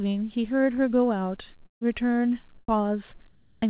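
Speech, carried over a call path with nothing above 4 kHz, which fits a G.711-style narrowband codec. A long network dropout runs from 1.66 to 1.95 s: the sound is stretched into a fading buzz for about 150 ms, then leaves roughly 140 ms of silence before speech resumes with a chunk missing, likely from lost packets. Comfort noise in place of the background appears at 2.58 to 2.68 s, about 16 dB quieter, and at 3.28 to 3.62 s, about 3 dB quieter. In both stretches the real room sound becomes flat, featureless hiss, likely because the sender stopped transmitting during pauses. An onset clipped by the voice detector occurs at 2.66 to 2.68 s, where about 20 ms of the start is lost under that noise and the sound begins abruptly, likely because the detector reacted late.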